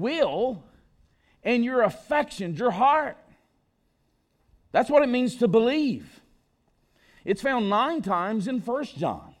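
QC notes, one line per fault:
Nothing stood out on listening to this speech recording.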